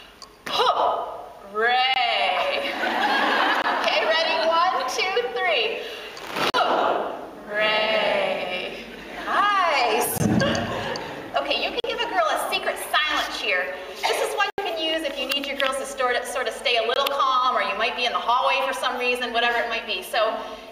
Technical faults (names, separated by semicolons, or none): block of digital silence